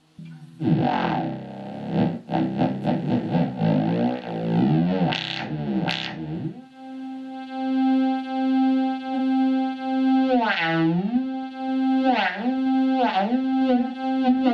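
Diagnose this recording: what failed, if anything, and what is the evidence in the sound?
The codec stage failed, with AAC frame loss with concealment at 9.14 to 9.19 s and again at 13.88 to 13.95 s. Each gap lasts about 43 ms, which fits a single lost AAC frame. The decoder rebuilt the missing block from the previous frame's spectrum, so each spot sounds smeared and noisy or phasey rather than falling silent. A plain dropout or buffer underrun would leave a hard gap or a click instead.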